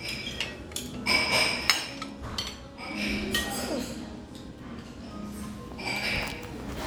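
No technical faults can be heard in this recording of sounds. Nothing in the audio points to a problem with how it was captured or passed along.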